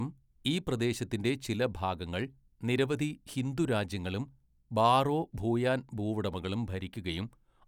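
No technical faults can be heard anywhere in the speech.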